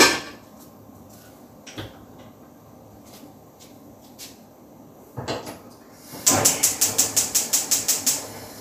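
The clip is a recording of sounds, and nothing is technically wrong with it.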